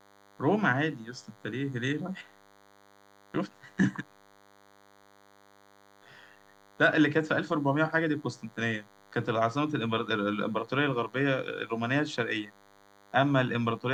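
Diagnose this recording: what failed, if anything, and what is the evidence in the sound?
DECT cordless phone buzz runs through the whole speech clip as a thin, steady 100 Hz buzz with many harmonics, roughly 30 dB below the speech. It enters at the analogue wiring stage: a nearby handset or base station's 10 ms radio bursts are rectified by the audio circuitry.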